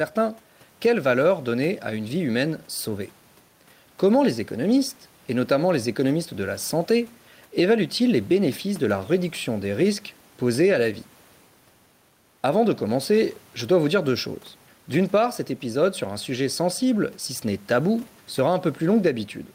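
Gain pumping runs through the whole of the speech. Each time the talker gets loud, the level is pulled down by about 5 dB and then swells back in the pauses, so quiet and loud passages sit unnaturally close together and the delivery sounds squashed. The likely cause is microphone gain set far too high, with a fast limiter or compressor clamping every peak. The room's background noise sits about 36 dB below the speech.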